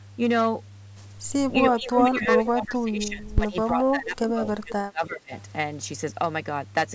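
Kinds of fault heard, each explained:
Mains hum: a steady 50 Hz tone about 15 dB below the speech throughout, forming an unbroken horizontal line low on the spectrogram.
Speech suppressed in double talk: between 1.76 and 5.32 s the speech repeatedly dips, by as much as about 20 dB and for roughly three seconds in all, likely an echo canceller ducking both talkers. The waveform envelope visibly shrinks.
Echo leak: at 2.0 to 2.06 s a brief copy of the speech returns 324 ms late, at roughly equal level, likely escaping echo cancellation. It appears as a repeated spectrogram pattern.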